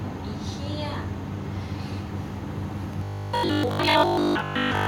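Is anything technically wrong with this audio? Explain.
Yes. From 2.93 s to the end, the speech takes on robotic sound from repeated short buffers. It becomes a rigid 50 Hz metallic buzz that loosely follows the words. The likely cause is audio arriving too seldom, so 20 ms chunks are looped while roughly 70% of the real signal is skipped. A spectrogram shows harmonic lines spaced every 50 Hz, and the waveform shows identical 20 ms cycles.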